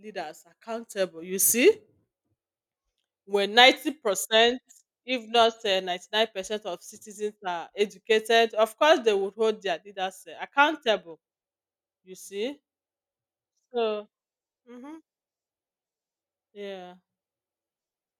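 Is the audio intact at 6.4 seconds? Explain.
Yes, the speech at 6.4 seconds is intact, with no dropout, click, distortion or other fault at that moment.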